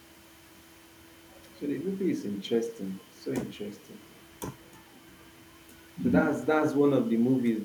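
Nothing technically wrong turns up anywhere in this short piece of speech, so there's no fault to point to and no cause to explain.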